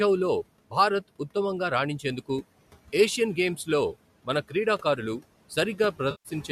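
A speech recording with two faults. The first is noise suppressor artifacts, present throughout. Room noise sits about 19 dB below the speech. The suppressor pulls it down by about 18 dB wherever it judges the noise to be steady, working frame by frame. So the background drops away in the gaps and swells back under the talking. The second fault is AAC frame loss with concealment, from 6.11 to 6.29 s, near the very end. About 140 ms of audio goes missing, which fits a run of roughly 14 lost frames. The decoder patches the gap by reusing the last good spectrum. That gives a smeared, noisy or phasey stretch in place of clean sound. The slight roughness under the speech is likely from the low-delay AAC coding at 64 kbps.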